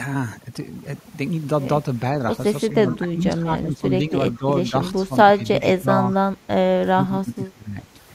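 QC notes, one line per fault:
Throughout: overdone noise removal. The background sinks, broken by twinkling specks. A noise reducer pushed too hard is shutting down individual frequency bands that sit near its noise estimate, and quieter parts of the speech vanish with them.
2.7 to 2.95 s and 5.61 to 5.66 s: echo leak. A faint delayed copy of the speech trails the original by 419 ms. It is about 25 dB below the speech in the first instance and about 20 dB below in the second. The likely cause is a loudspeaker-side echo canceller letting part of its microphone pickup slip back down the line.
2.72 to 6.13 s and 6.93 to 7.95 s: speech suppressed in double talk. The talker's level dips by as much as about 15 dB, in pieces totalling roughly two seconds and then one second. Likely both sides overlapped and the echo canceller, unable to separate talker from echo, turned both down.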